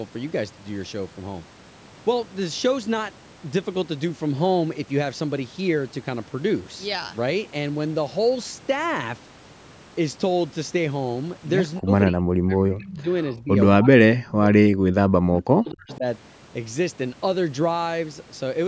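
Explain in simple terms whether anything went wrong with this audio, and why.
Speech suppressed in double talk: the voice sinks or drops out at 11.79–11.92, 12.11–13.08, 13.27–13.57 and 13.77–16.05 s, likely because the other side spoke over it. Unlike a network dropout, it fades in uneven chunks. Echo leak: at 15.91–15.97 s a faint copy of the voice returns about a quarter second late, a repeat rather than a cut.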